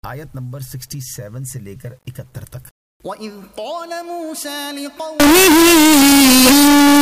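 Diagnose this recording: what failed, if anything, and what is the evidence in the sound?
From 5.20 s to the end at 7.02 s the sound turns into very loud, harsh distortion, with quiet stretches as loud as the rest. At the sample-format conversion stage this is likely signed and unsigned mixed up on the 8-bit samples: the flipped top bit sends each zero crossing across the whole range.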